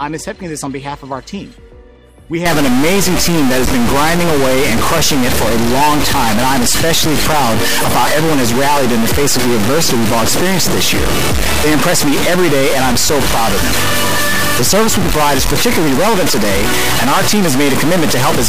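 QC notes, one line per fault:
2.46 s to end, stuck bit: one data bit likely held fixed, offsetting about half the samples by a step near -10 dBFS, giving harsh, buzzy distortion.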